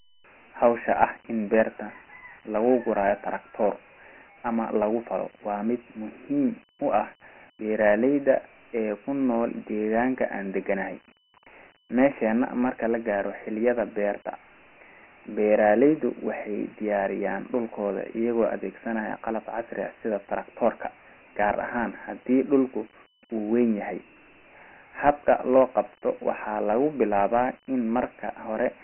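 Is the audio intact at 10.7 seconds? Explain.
No. At 10.7 seconds the speech sounds dull and boxed-in, with a gritty hiss riding on every syllable and nothing above about 3.1 kHz. This Dialogic VOX ADPCM damage runs through the whole clip. The codec stores each sample as a 4-bit step from a predicted value, and the coarse steps leave that grainy noise trailing the speech. The low ceiling fits a 6,000-sample-per-second rate, which at 4 bits gives 24 kbps.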